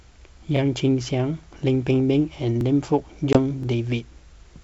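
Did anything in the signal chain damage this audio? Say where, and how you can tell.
Yes. Overlapping chunks at the buffer stage: stutters at 0.57, 1.59, 2.61 and 3.63 s, each replaying about 23 ms. That fits 1.0 s blocks written with overlapping starts.

Packet loss on an ADPCM call, at the network stage: a hard-edged 20 ms hole near 3.33 s, about one packet. The ADPCM decoder then resumes slightly distorted until its predictor resynchronises by 3.38 s.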